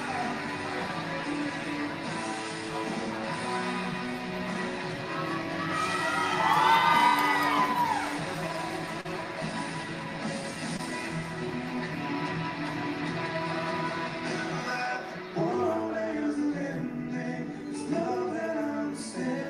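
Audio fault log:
9.01–9.07 s and 10.77–10.81 s: short concealed packet loss. About 40 ms, then 20 ms, of audio arrived too late to play. The receiver extended the preceding sound to cover each gap and blended back in, leaving a brief smear or wobble.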